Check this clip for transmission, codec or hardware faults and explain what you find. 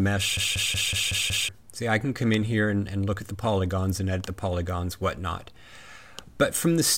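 One fault is present. A system hang loop runs from 0.37 to 1.49 s. The system froze while the sound hardware kept replaying its ring buffer, repeating a 186 ms piece, which fits an 8192-sample buffer, six times at 5.4 Hz. This produces a machine-gun stutter and loses about a second of audio.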